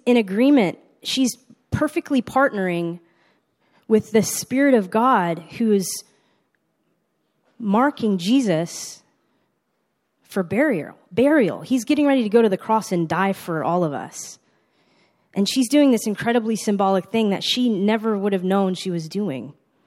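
Nothing in the speech stood out as a technical problem on listening.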